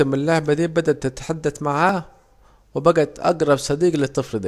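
At 1.89 s, right after "اللعبة دي بدت تتحدد", an overlap between stream segments causes a tiny skip. Two segment timestamps overlapped, so the player trimmed a few milliseconds of real sound. The waveform jumps, unlike a dropout, which leaves an audible gap of silence.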